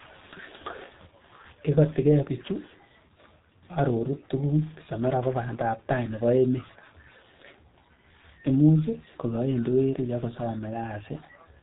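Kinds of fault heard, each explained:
G.723.1 codec: a low-rate telephony coder that models the sound in 30 ms frames at a rate fitting about 6.3 kbit/s, and here the damage is heavy. Nothing passes above 3.8 kHz, so the speech is muffled and hoarse with smeared consonants; unlike a plain low-pass filter, the voice model itself roughens and updates sluggishly.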